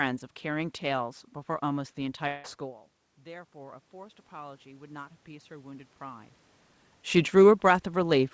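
At 2.28 s the audio stream most likely stopped arriving for a while, a long network dropout. About 160 ms of sound never reached the player, and the receiver covered almost all of that gap by stretching out the last sound it had. Until 2.47 s there is no true silence, only a smeared, buzzy continuation that fades. The sound then resumes further on, with that stretch of audio simply gone.

From 3.22 s to 6.38 s the automatic gain rising fault sets in. The level reaching the gain control fell by about 19 dB, so the control judged the input too quiet and slowly pushed its gain up by about 8 dB. Over roughly three seconds the voice and the room noise behind it swell together, one gradual lift rather than a jump. That partly restores loudness while making the background more prominent. All of this passes through a G.722 call path with nothing above 8 kHz.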